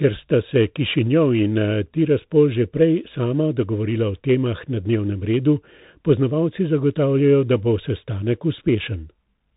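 A speech clip that carries the Bluetooth CVSD headset codec throughout, from start to end. Nothing above about 3.8 kHz survives, and the codec damage is plainly audible: a granular hiss sits beneath the speech, s sounds come out scratchy, and loud bright passages smear where the one-bit up/down stepping cannot keep pace. That grainy, slope-limited texture, which fits a 64 kbps stream, separates it from a clean telephone band-limit, which would sound dull but smooth.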